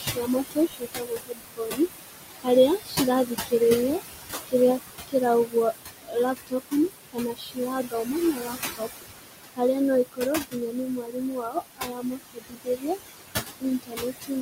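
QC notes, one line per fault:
throughout: noise suppressor artifacts. The room noise sits only about 7 dB under the speech, so the suppressor works hard, pulling about 18 dB out of the bands it reads as steady noise. The background dips between phrases and swells under them.
0.00–4.54 s, 5.08–12.86 s and 13.60–14.31 s: speech cut by the noise suppressor. With the noise this close to the speech, quieter bits get misread as noise and pushed down, at worst by about 22, 21 and 19 dB. Roughly two seconds, three seconds and a third of a second of speech in those stretches come out swallowed or faint.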